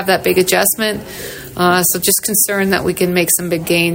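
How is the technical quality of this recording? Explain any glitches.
No glitches turn up anywhere in the recording; the signal stays continuous and steady, with no dropouts, clicks, distortion or other transmission or processing faults to explain.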